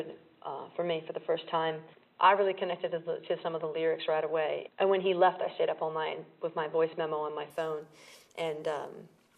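Input switched to a poorer device, from the start to 7.50 s: for this stretch the sound is narrow and boxy, with nothing above 4 kHz, so it lacks air and sounds muffled. At 7.50 s it clears abruptly with no gap, the top end returns, and the level shifts by around 5 dB. A faint background noise sits well under the signal during the dull stretch. The likely cause is the recording input running on a lower-bandwidth microphone or headset profile before changing to a fuller one.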